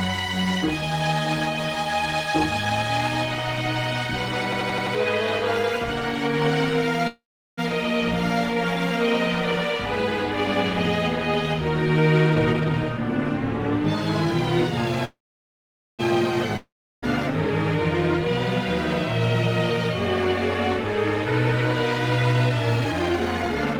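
At 4.52 s a system hang loop begins and runs to 4.95 s. A single 85 ms slice of sound repeats exactly five times at about 11.7 Hz, which fits a 4096-sample ring buffer that the hardware kept cycling while the software was stalled. It is heard as a machine-gun stutter, and around 0.4 s of real audio is lost. A spectrogram shows identical vertical blocks at even spacing, and the waveform shows the same shape copied end to end.

From 7.07 s to 7.59 s there is a call audio freeze, likely caused by packets being held up until the jitter buffer ran dry. The last sound is stretched into a buzz that decays, leaving about 0.39 s of silence. Playback then resumes exactly where it stopped, so nothing is missing, but about 0.5 s of extra delay has been added. On a spectrogram, smeared horizontal streaks fade into a blank gap before normal detail returns.

From 12.27 s to 12.99 s a jitter buffer speed-up drains that built-up backlog. 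Short pitch-period pieces are cut out repeatedly, so the sound runs at about 151% speed without changing pitch and comes across as hurried, with roughly 0.4 s trimmed away. Harmonic lines on a spectrogram stay at the same height, but events crowd closer together, and the waveform shows tiny splice points packed in sequence.

A second call audio freeze runs from 15.05 s to 16.01 s, again likely from held-up packets. The decaying buzz gives way to about 0.84 s of silence, then the sound continues intact with roughly 0.94 s more delay. It shows as a long flat stretch in the waveform.

Right after that, from 16.57 s to 17.04 s, comes a long network dropout, likely from packets that never arrived. A fading buzz leads into about 0.35 s of silence, and when the sound returns, about 0.48 s of content is gone, with the delay left nearly unchanged. Unlike the freezes, the spectrogram shows an abrupt jump in content across the gap.

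A final jitter buffer speed-up from 22.34 s to the end at 23.79 s plays at about 138% speed at the same pitch, removing about half a second. The sound is audibly rushed, and events are compressed together on the spectrogram.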